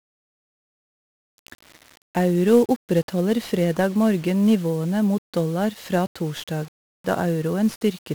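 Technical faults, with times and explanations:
Throughout, 1-bit DFPWM compression: the speech is coated in a dense, fuzzy crackle with heavy broadband hiss that swamps the upper frequencies, so consonants and high detail sink into noise. The damage is heavy. With only one bit per sample, the coder can only nudge an adaptive level up or down at each step, and the tracking error it leaves behind comes out as loud, wideband quantisation noise. The grain and density of that noise fit a rate of around 48 kbps.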